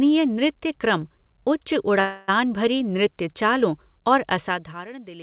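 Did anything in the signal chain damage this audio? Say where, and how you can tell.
Yes. A call audio freeze at 2.0–2.3 s, after "नृत्य क्रम उच्च", puts about 280 ms of fading buzz into the sound, likely from network delay draining the jitter buffer. It resumes with nothing missing.

Zipper noise at 4.38–4.88 s, after "भरी नृत्य चालों और": a roughly 15 dB level drop applied in unsmoothed 1 dB steps, about 30 per second, ticks audibly.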